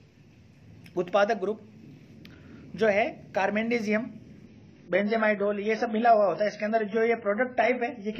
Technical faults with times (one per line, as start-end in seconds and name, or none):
4.46-8.20 adaptive stream at a lower bitrate